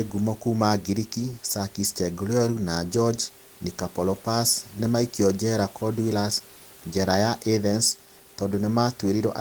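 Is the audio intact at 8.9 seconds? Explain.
Yes, the audio is intact at 8.9 seconds; the speech continues cleanly, with only the room's own background noise sitting about 29 dB beneath it.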